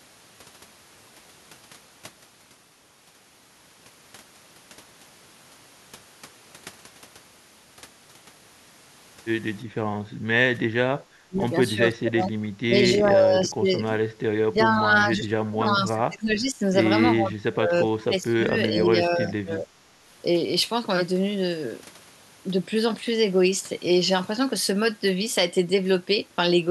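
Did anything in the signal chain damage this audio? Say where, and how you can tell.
Yes, in call processing. The speech is suppressed in double talk at 9.84–9.91, 11.19–11.43, 11.75–12.49, 12.67–12.75, 12.98–13.68, 14.49–16.61 and 17.19–19.79 s. The level dips by up to around 30 dB. The likely cause is the echo canceller mistaking the talker for loudspeaker echo and turning both down.

The background is gated by the echo canceller at 10.21–10.26 s. The room sound drops by about 9 dB for roughly 50 ms, then comes back. The canceller clamped the microphone hard while the loudspeaker played, then released it.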